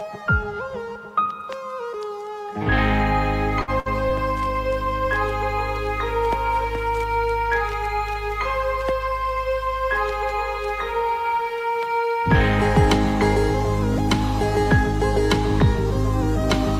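At 3.61 to 3.70 s and again at 3.79 to 3.88 s, a burst of packet loss occurs. Each time, about 60 ms of audio never arrives. The receiver stretches the last sound and fades it, giving a held buzz or fading hiss. Then the audio jumps ahead.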